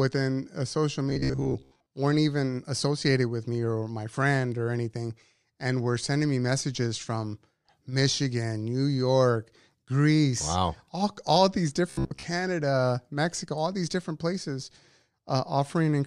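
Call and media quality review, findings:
Robotic sound from repeated short buffers, 1.10–1.91 s (after "uh social", before "weren't even associated with") and 11.90–12.24 s (after "wow all all these"). Rigid metallic buzz at 66.7 Hz. Likely starved playout buffer looping a 15 ms chunk, dropping most real audio. Spectrogram: dense harmonic comb; waveform: identical repeating cycles.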